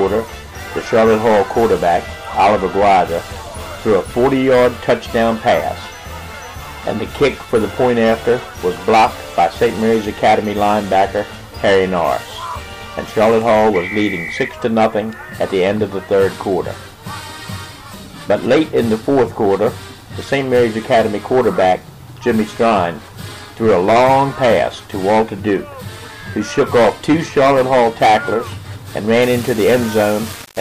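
Low bit depth without dither takes over from 29.22 s to the end at 30.6 s. The audio in this stretch sounds as if it was likely rounded to about 4 bits with no dither. The rounding error tracks the signal, so the sound turns grainy and gritty, and the distortion shifts as the sound shifts. The error sits only about 15 dB below the signal, so it is heavy, and the quietest parts collapse toward silence or sputter between steps.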